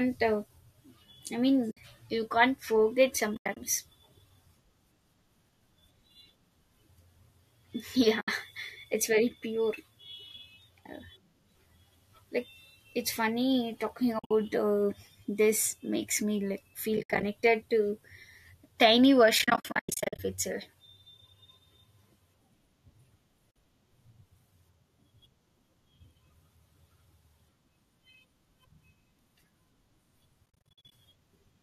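AAC frame loss with muting: compressed frames of this speech went missing and the decoder zeroed them, so the overlapping windows fade each gap out and back in, leaving soft-edged holes.

The first hole, at 1.71 to 1.77 s just before "you can't forget", lasts 60 ms. After that phrase, 140 ms drops out in patches across 3.35 to 3.57 s, the longest run around a tenth of a second. A 70 ms hole follows at 8.21 to 8.28 s. Between "like it's funny talking" and "uh this makes", 110 ms vanishes in pieces over 14.19 to 14.31 s. At 16.97 to 17.23 s, 150 ms is lost in patches. The worst stretch runs from 19.39 to 20.19 s, where 530 ms disappears in repeated short holes, so the speech flutters in and out. There is a brief 50 ms gap at 23.51 to 23.56 s. The last, at 30.46 to 30.92 s, loses 290 ms as many short dropouts.

Under the gaps, a faint graininess is likely due to low-delay AAC coding at about 64 kbps.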